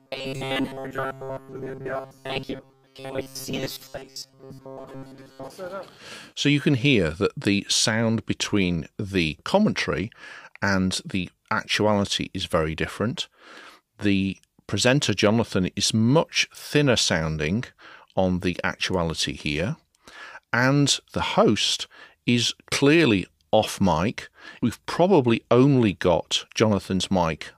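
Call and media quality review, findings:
Robotic sound from repeated short buffers, 0.01–5.52 s: rigid metallic buzz near 134 Hz, likely a starved playback buffer looping about 7.5 ms segments, roughly two-thirds repeated audio.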